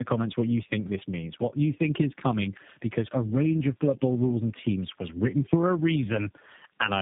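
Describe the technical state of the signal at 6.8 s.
At 6.8 s the speech carries tandem speech coding, present throughout the clip. It sounds like three low-rate speech codecs in a row, each re-encoding the previous one's degraded output, leaving the speech rough, muffled and warbly, with nothing above 3.7 kHz.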